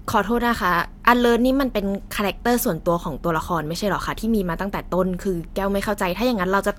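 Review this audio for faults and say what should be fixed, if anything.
Nothing needs fixing, since no technical fault can be heard anywhere in the speech signal.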